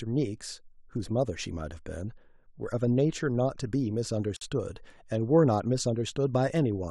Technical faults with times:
4.36-4.41 gap at a join of encoded pieces

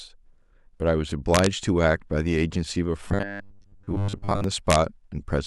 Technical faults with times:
1.34-1.46 integer overflow
3.08-4.44 robotic sound from repeated short buffers
4.70-4.75 integer overflow

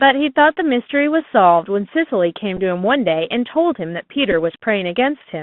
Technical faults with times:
0.00-5.43 Bluetooth CVSD headset codec
2.57-2.59 Bluetooth headset packet repeated
4.32 Bluetooth headset packet repeated

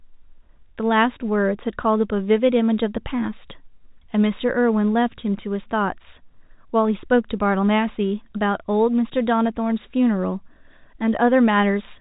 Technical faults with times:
none

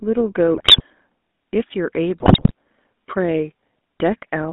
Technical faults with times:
0.00-4.52 GSM full-rate codec
0.56-0.82 GSM bit errors
2.18-2.52 GSM bit errors

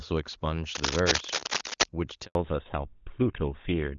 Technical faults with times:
0.75-1.85 cable scratch noise
2.25-2.35 handover gap
2.35-3.98 fallback to narrowband

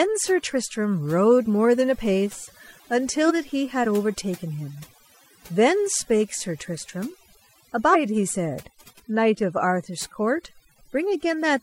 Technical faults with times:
0.00-11.63 overdone noise removal
3.16-3.31 compressed frames skipped
7.90-7.96 compressed frames skipped

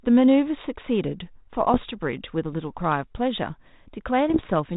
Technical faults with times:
1.69-1.85 bit errors on an ADPCM link
4.29-4.51 bit errors on an ADPCM link

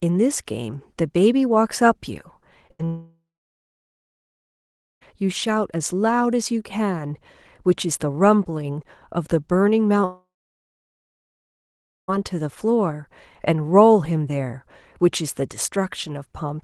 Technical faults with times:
2.67-2.71 short concealed packet loss
2.71-2.81 burst of packet loss
2.85-5.03 long network dropout
10.05-12.10 long network dropout

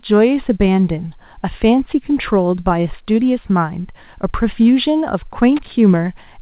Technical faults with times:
5.57-5.72 loose connector crackle

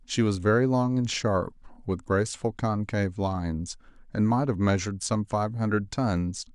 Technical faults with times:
0.35 DC step
6.17 DC step

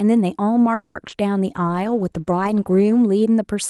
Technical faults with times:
0.74-0.96 call audio freeze
1.07-1.23 short concealed packet loss
1.47-3.11 call bitrate drop

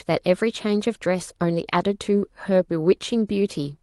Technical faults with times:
none

